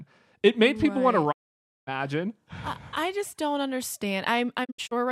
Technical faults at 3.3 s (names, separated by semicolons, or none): none